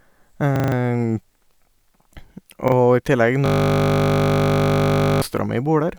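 Repeated buffers at 0.56 to 0.72 s and again at 2.68 to 2.72 s happened because fresh audio arrived late and the device replayed its last 40 ms block. The first plays four extra times as a hard-edged stutter, losing around 150 ms; the second repeats once, a brief hiccup.

A system hang loop runs from 3.46 to 5.22 s. The system froze while the hardware kept cycling one 20 ms stretch of its ring buffer, repeating it 88 times, so the sound collapses into a steady 50 Hz buzz.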